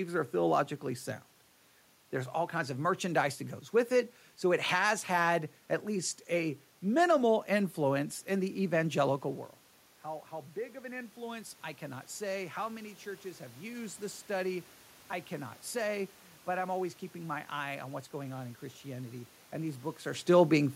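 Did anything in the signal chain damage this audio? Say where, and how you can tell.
Yes, call processing: automatic gain rising from 9.23 to 13.99 s. After the talker drifts back around 9 s, AGC slowly adds about 6 dB, lifting room noise too.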